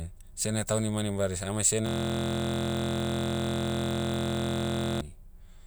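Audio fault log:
1.86–5.01 s, system hang loop: the speech stops moving and a single 23.22 ms slice of audio replays well over a hundred times, which fits the playback hardware cycling a 1024-sample ring buffer while the driver or system stalled. Repeating that short a piece at 43.1 Hz fuses into a steady, rough buzz. On a waveform the segment is an identical shape tiled edge to edge; on a spectrogram it appears as frozen horizontal bands, harmonics spaced 43.1 Hz apart.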